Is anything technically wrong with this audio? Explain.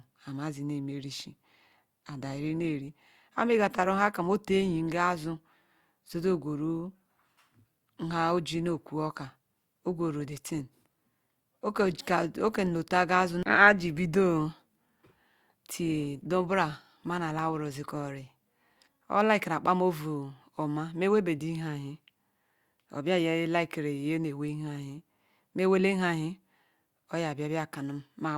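Yes. An adaptive stream at a lower bitrate runs from 1.13 s to 19.13 s. When the connection slowed, the player switched to a leaner encoding of the same speech and then switched back. The step is consistent with going from 64 to 32 kbit/s Opus. The quality changes abruptly at both boundaries, with no gap or dropout. Inside that 18-second stretch the speech carries more obvious codec artefacts. The encoder has half the bits to spend, so it must approximate more of the signal.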